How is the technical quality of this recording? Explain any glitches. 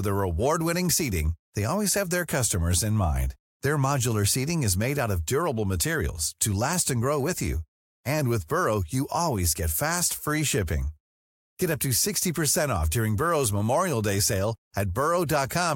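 The recording has no technical glitches to explain. Nothing in the speech breaks off, jumps or is disturbed at any point.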